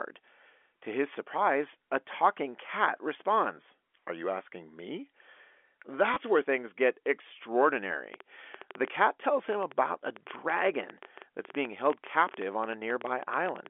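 At 6.14 s, just before "where things get", packet loss with last packet repeated blanks 20 ms of speech, which fits two lost 10 ms packets. The receiver replays the last packet, and the misaligned joins give a brief stutter, a short run rather than a single blip.

From 8.14 s to 13.67 s a train of clicks runs at about 8.5 per second, unevenly spaced, roughly fifty in all and peaking well above the speech. Unlike the stutter, these same-shaped pops continue through pauses, which points to likely interference from nearby equipment or a faulty connection.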